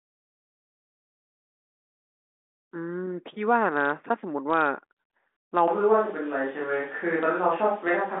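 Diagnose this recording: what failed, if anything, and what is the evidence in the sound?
At 5.68 s the sound abruptly turns roomy and hollow, loses low end, and picks up background noise sitting roughly 25 dB under the speech. It stays that way to the end with no clear change in level. That sudden shift in timbre points to a likely switch to a distant microphone at the capture stage: the close mic's feed dropped out and a farther pickup took over. The telephone band, limited to about 3.8 kHz through the 40 kbit/s G.726 path, holds steady across the change.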